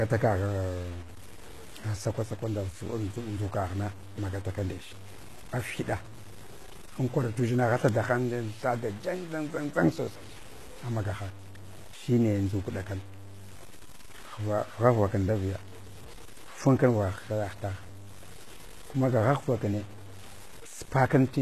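From start to finish, the speech carries grainy, signal-following distortion: low bit depth without dither, likely truncation to around 7 bits, with error only about 20 dB down that sputters on quiet tails, unlike steady hiss. Throughout, the treble sounds rebuilt rather than real, metallic and lispy on s sounds and cut off above 12.3 kHz, pointing to HE-AAC compression, likely near 16 kbps, not plain low-pass filtering.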